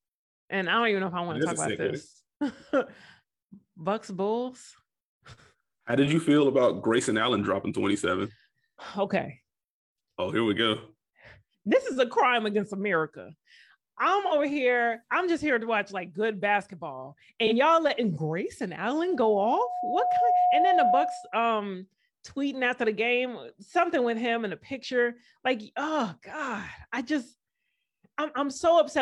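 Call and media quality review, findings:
AAC frame loss with concealment at 14.26–14.33 s and 17.46–17.53 s. Brief smeared, noisy patches, about 43 ms each, consistent with one lost frame rebuilt from the previous spectrum.

Loudspeaker feedback squeal, 19.01–21.39 s. Steady 723 Hz tone swells over roughly a second and a half to about 5 dB above the speech. Mic-to-speaker loop gain exceeds unity.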